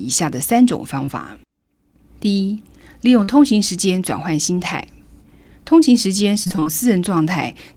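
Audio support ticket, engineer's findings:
Short concealed packet loss, 1.05–1.10 s and 3.24–3.30 s: brief smear, about 20 ms then 40 ms missing. Receiver jitter buffer and decoder concealment extended the previous sound. Single isolated holes with clean recovery, unlike a robotic run.

Repeated packet loss (robotic sound), 6.44–6.68 s: choppy stretch of roughly six closely spaced holes, none longer than 23 ms. Concealment covers about half the span. The holes come in a cluster, each following soon after the last, which sets this apart from the isolated smears earlier.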